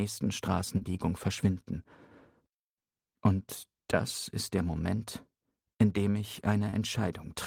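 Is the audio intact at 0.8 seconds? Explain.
No. Short concealed packet loss from 0.77 to 0.83 s: about 40 ms never arrived, and the receiver extrapolated the preceding sound, giving a brief smeared wobble.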